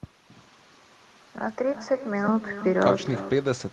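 Echo with no canceller runs throughout this short speech clip: every phrase returns roughly 300 ms later as a quieter copy, about 13 dB down and thinner. The far end's loudspeaker feeds its microphone, and nothing strips that loop before it comes back.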